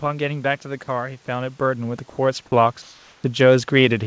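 At 0.84 to 0.88 s and again at 2.10 to 2.18 s, brief stretches of speech give way to flat, steady noise: sound dropped by the voice detector, likely because it mistook quiet speech for background. On a spectrogram, the harmonics stop abruptly and are replaced by a smooth, structureless band.

From 2.82 to 3.24 s, the real background is replaced by comfort noise, likely from discontinuous transmission. The noise sits about 35 dB below the loud speech and is about 1 dB quieter than the real room. On the waveform it looks uniform, and on the spectrogram the room's texture turns into even grey.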